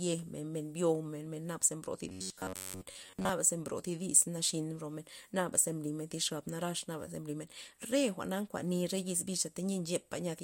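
From 2.09 to 3.29 s, between "ze bro thi" and "ze mbro thi dis", robotic sound from repeated short buffers turns the speech into a metallic 94 Hz buzz, likely from about 11 ms chunks looping as fresh audio lagged.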